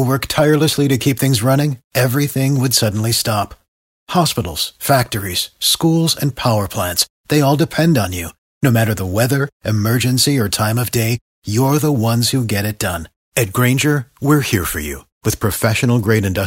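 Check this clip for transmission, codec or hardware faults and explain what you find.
No faults can be heard anywhere in this speech recording.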